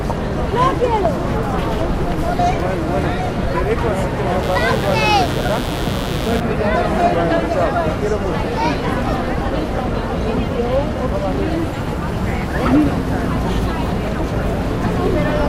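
From 4.43 to 6.40 s, a steady, raspy mains buzz appears, somewhat below the sound. Switching spikes at twice 60 Hz leaked in, adding harmonics into the kilohertz range.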